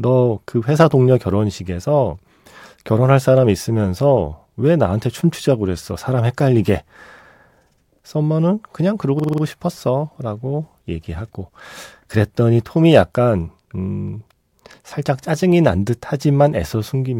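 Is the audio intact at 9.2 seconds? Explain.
No. A system hang loop runs from 9.20 to 9.43 s. The system stalled while the hardware kept replaying one ring buffer. A 46.44 ms slice, which fits a 2048-sample buffer, repeats five times at 21.5 Hz. It sounds like a rapid stutter.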